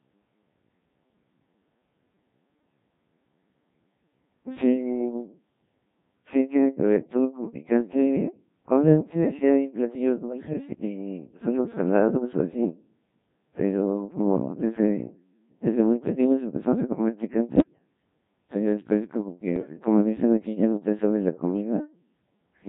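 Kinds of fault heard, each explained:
Codec 2 vocoder: the whole clip runs through a very low-rate digital-radio vocoder, around 1.3 kbit/s by the sound of it, that rebuilds the speech from pitch, voicing, level and a spectral outline. The waveform isn't preserved, so the voice comes out heavily robotic and buzzy throughout.
Bit errors on digital voice radio: two short bursts, from 17.56 to 17.78 s and from 19.56 to 19.73 s, where corrupted bits land in the vocoder frames. Each bad bit skews a whole frame's pitch, level or tone, so the voice lurches into warbly, bleepy gibberish for a moment.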